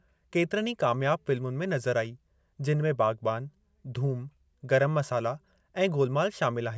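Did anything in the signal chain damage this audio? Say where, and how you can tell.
No, nothing in this speech recording stood out on listening as damage from any stage of the signal chain.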